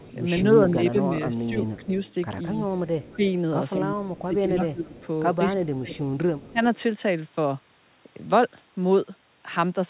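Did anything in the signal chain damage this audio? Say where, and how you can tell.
Yes. A faint copy of the speech trails it by 208 ms at 0.0–0.15, 1.77–2.14, 3.02–3.16, 4.06–5.07 and 6.4–6.79 s, about 25–30 dB down. This echo leak is likely from the call processing stage, where the far end's echo canceller let loudspeaker pickup through.

The speech dips by up to about 15 dB during 0.49–1.94, 3.16–4.96 and 5.55–6.61 s. This is speech suppressed in double talk, likely because the canceller attenuated both overlapping talkers.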